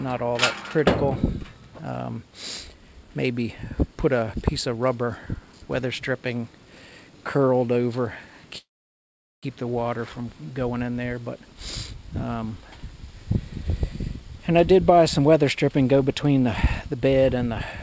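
From 8.58 to 9.45 s there is a call audio freeze: the last sound smears into a brief fading buzz and then about 0.78 s of silence. The likely cause is packets held up in transit. Unlike a dropout, nothing is lost, and the audio resumes exactly where it stopped, now about 0.85 s later.

From 14.71 s to the end, a jitter buffer speed-up plays the audio at about 106% speed, trimming roughly a fifth of a second to clear the backlog. Pitch stays unchanged, which separates it from a resampling speed error. With the wideband call codec, nothing sounds above 8 kHz.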